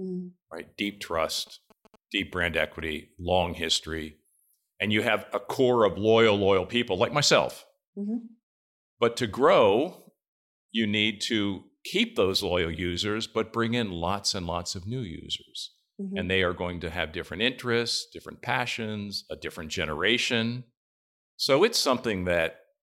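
From 1.38 to 2.90 s there's GSM signalling interference: a nearby 2G phone sending short bursts of radio activity, which the audio circuitry rectifies into sound. You hear a galloping dit-dit-dit of brief 217 Hz buzzes, sitting roughly 25 dB under the speech.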